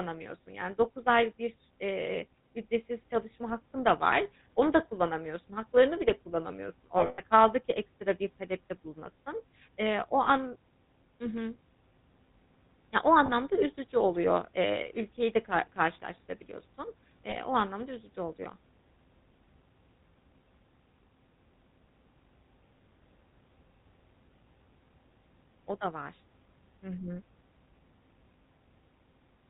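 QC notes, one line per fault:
Throughout: GSM full-rate codec. The sound has a plainly audible buzzy, gravelly roughness, consistent with a 13 kbps GSM full-rate codec. The codec models the vocal tract and drives it with a coarse, regularly spaced pulse excitation, which causes the grit. On a spectrogram, energy stops at a hard ceiling near 4 kHz. Harmonics look smeared and striated rather than clean, and the waveform looks rougher and less detailed than natural speech.
6.98–7.20 s: lost GSM frames. Around 140 ms of audio drops out, scattered across 200 ms. The longest gap lasts roughly a tenth of a second, and about seven 20 ms frames are lost in all. Each gap is filled by repeating the last good frame, so the sound freezes into a brief metallic ring. On a spectrogram this shows as flat, repeated horizontal bands.
10.24 s, 13.26 s, 17.3 s: lost GSM frames. Each is a single 20 ms dropout, patched by one repeated frame. 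It is heard as a tiny rough, metallic blip. On a spectrogram it shows as a short smeared vertical sliver.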